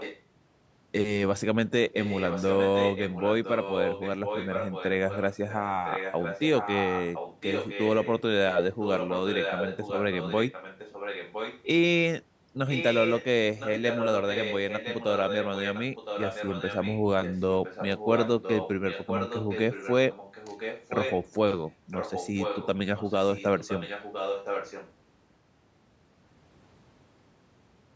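From 0.0 to 0.23 s a faint delayed copy of the speech is heard, roughly 15 dB below it. It returns much stronger, only about 5 dB down, from 1.93 to 11.63 s, 12.68 to 13.25 s, 13.58 to 21.27 s and 21.91 to 24.92 s. It trails the direct speech by about 1.01 s. This is an echo leak, likely from a far-end loudspeaker whose echo canceller let the microphone pickup return down the call, within the 8 kHz call bandwidth.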